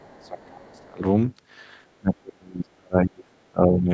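An echo canceller that likely failed to keep up with a speakerphone lets the other side's voice leak through at the very start of this short speech clip, from 0.0 to 0.44 s. It stays very faint, far beneath the talker, as a trace of a second voice. The same canceller, with both sides likely talking at once, suppresses speech in double talk from 0.2 to 1.04 s and again from 1.99 to 3.9 s. It likely mistakes the talker for echo and pulls the voice down in deep dips, with the second stretch covering most of the clip's end. The call's microphone processing leaves nothing above 8 kHz.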